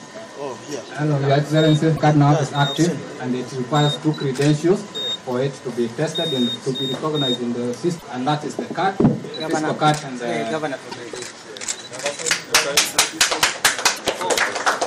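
At 1.96 to 2.00 s, 7.98 to 8.03 s, 10.91 to 10.95 s and 13.96 to 14.00 s the audio skips forward with a brief garbled disruption, about 40 to 50 ms each, which fits spans of 24 ms frames. The likely cause is a broken MP3 bit reservoir. After frames go missing, the next frame reaches back for data it stored earlier and decodes bytes belonging to a different frame, so the first frames after each cut come out corrupted.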